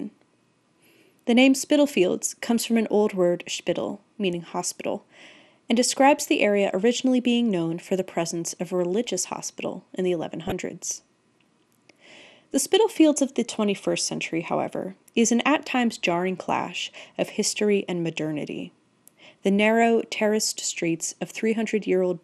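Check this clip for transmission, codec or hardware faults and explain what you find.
Two faults are audible in this speech clip. One is a codec problem throughout, and the other is a brief transmission error.

MP2 compression affects the whole clip. The sound is dull and granular, with gurgling distortion. This is likely MPEG Layer II at a low bitrate, around 80 kbps, starving and switching off upper sub-bands.

DAB burbling occurs from 10.47 to 10.52 s, just after "religious hospital in the". A low bit error rate corrupted a few frames, so wrong samples put short blips of noise into single sub-bands. The result is a short burst of burbling.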